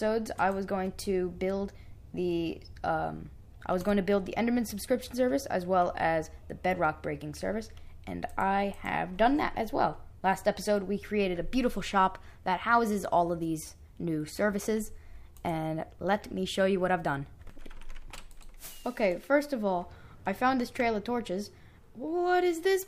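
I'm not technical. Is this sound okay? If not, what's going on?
Yes, nothing in this recording stood out as a problem when listening to it.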